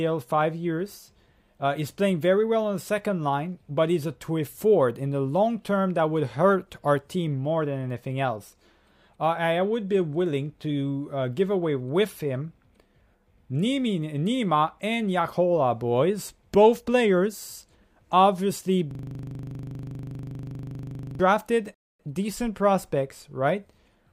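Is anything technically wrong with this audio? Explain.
Yes, there are two faults. From 18.91 to 21.20 s there is a system hang loop. The computer or driver stalled while the audio hardware kept replaying the same 40 ms stretch of its buffer. That segment repeats exactly at 25 Hz for about 2.3 s, giving a coarse, rattling buzz.

From 21.74 to 22.00 s there is a rebuffering stall. The player ran short of incoming data and paused until more arrived. The sound drops to silence for about 250 ms, then picks up exactly where it left off. Nothing is skipped, but the timeline is stretched.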